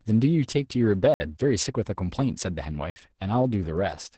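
Opus voice compression runs through the whole clip. The speech has been coded by the SILK linear-prediction coder in wideband mode, and nothing is heard above about 8.9 kHz. The excitation is coded coarsely, so the speech sounds muffled, hoarse and slightly robotic. The damage is heavy, which points to a bitrate around 10 kbps, coded in 20 ms frames.

A block of digital silence appears at 1.14 s and again at 2.90 s, each 60 ms long. Both times a run of samples was replaced by zeros, most likely because the output buffer was not filled in time. The sound drops straight to digital silence and returns without any fade, so each gap is a short hole.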